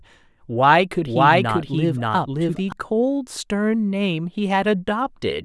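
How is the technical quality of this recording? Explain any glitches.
There's one clear glitch: a doubled audio track running from about 1.06 s to 2.72 s. For that stretch the speech is mixed in twice, with a second full-band copy trailing around half a second behind and sitting at roughly the same level as the original. It's likely a second capture through a slower path, or an edit that left two copies out of step. There's no decay or room colour on the copy, so it reads as a stacked duplicate rather than an echo, and it cuts in and out abruptly at both edges.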